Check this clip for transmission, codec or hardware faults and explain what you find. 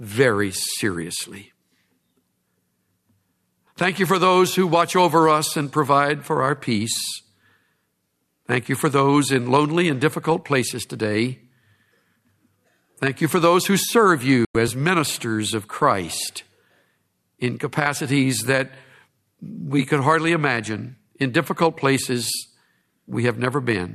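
One transmission fault is present in the speech. A digital broadcast dropout occurs from 14.45 to 14.55 s. The receiver stopped getting valid frames and muted until good ones returned. The audio fades out over 3 ms into a 96 ms silence, which fits about four lost frames, and then resumes mid-programme. The audio sent during the gap is lost.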